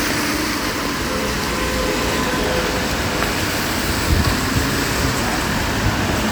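No technical faults are audible.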